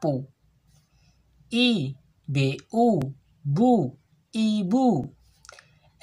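A brief stutter at 3.02 s and again at 5.04 s comes from overlapping chunks: each 2 s block restarts 20 ms early, replaying that slice at the join.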